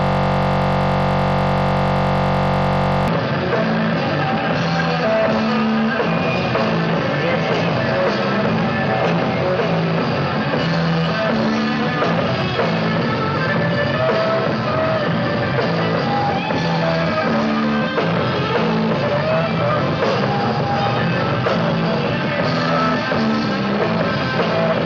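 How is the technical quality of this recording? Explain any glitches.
The recording has one clear fault at the start. From 0.0 to about 3.08 s there is a system hang loop, already under way when the clip begins. The computer or its audio driver stalled. The sound hardware kept replaying the same small stretch of its buffer. That stretch is 21.33 ms long, which fits a 1024-sample buffer. It repeats about 143 times. At 46.9 repeats per second, it becomes a steady, low buzz.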